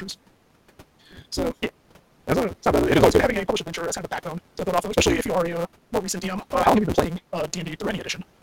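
From start to finish the speech carries a block size mismatch (truncated) fault: one stage hands on longer blocks than the next stage takes in, so the tail of every block is discarded. The cuts recur at 172 Hz, which fits a read size of 256 samples, and they are heard as a steady buzz at that rate. Because material is dropped each block, the speech runs about 1.88 times too fast, though its timbre is kept. Room noise sits about 26 dB below the speech.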